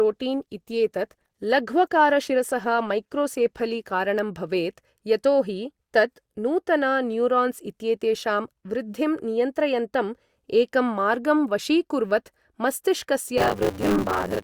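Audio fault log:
0.00–4.0 s, adaptive stream starting at a low bitrate: the speech opens dull and smeared, with thin, synthetic-sounding treble and strong codec artefacts, which fits a start around Opus 16 kbit/s. The player chose this to begin playback quickly. Once it had gauged the connection it switched up, apparently to about 64 kbit/s. At 4.0 s the quality jumps suddenly with no gap, and the spectrum then extends to 20.4 kHz.
13.37–14.44 s, buffer tearing: a steady robotic rattle at 100 Hz rides on the speech to the end of the clip and is heard only while there is signal. The writing program and the hardware reading the ring buffer have drifted until they cross inside every period. Roughly half of each 10 ms buffer then holds audio from about 40 ms earlier, so hard splices on both sides of that stale section repeat at the buffer rate.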